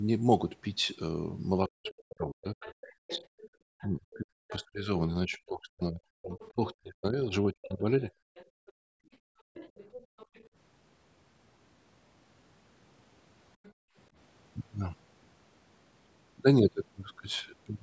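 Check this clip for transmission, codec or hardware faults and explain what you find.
Yes, there are faults: the clip shows echo-cancellation trouble on a call, in three related forms.

Speech suppressed in double talk, 1.66 to 8.12 s: both ends were likely talking at once, so the echo canceller couldn't tell the near talker from loudspeaker echo and attenuated everything. Roughly 5 s of the speech dips or breaks up, falling by up to about 40 dB.

Other side's voice leaking through, at 1.86 to 4.64 s, 6.33 to 6.5 s, 7.62 to 10.45 s and 13.64 to 13.73 s: residual loudspeaker echo likely escaped cancellation into the microphone. A second voice sits underneath, at about 15, 25, 20 and 30 dB below the speech respectively.

Background gated by the echo canceller, 8.46 to 10.17 s and 13.73 to 13.96 s: while the far end played, the canceller clamped the microphone hard. Room tone drops out for about 1 s in total in the first span, by up to about 30 dB, and for about 0.2 s in the second, by about 33 dB, then returns. 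The call's microphone processing, with nothing above 8 kHz, is ordinary band-limiting rather than a fault.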